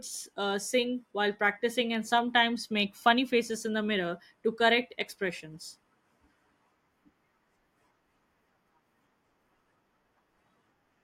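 Nothing goes wrong anywhere in this bit of speech, so there are no faults to walk through.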